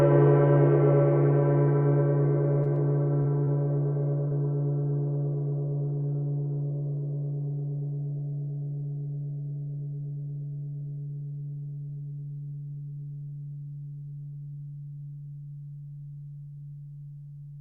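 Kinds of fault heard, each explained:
Repeated packet loss (robotic sound): from 2.63 to 3.48 s, holes up to 21 ms are patched with continued sound, making the music choppy; spectrograms show smeared, duplicated slices.
Short concealed packet loss: at 4.28 s a 40 ms stretch is partly missing and partly filled in, heard as a brief smear; the waveform shows continued sound blending back.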